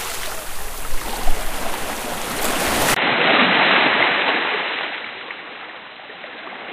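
At 2.94 s there is a brief gap of about 20 ms. After it, the sound becomes dull and boxy and stays that way to the end. Nothing is left above 4 kHz. The level also drops by roughly 5 dB, and faint new background noise sits well below the signal. This is most likely an input switched to a poorer device partway through. A narrower, noisier input then carries the rest of the recording.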